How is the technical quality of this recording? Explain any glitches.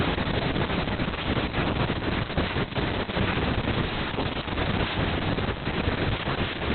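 Pretty rough technically: heavy Opus voice compression runs the whole way through. The speech sounds muffled and a bit hoarse and robotic, with nothing above 4.3 kHz. That fits the SILK coder at a very low bitrate around 6 kbps, narrowing to narrowband and coding the excitation coarsely.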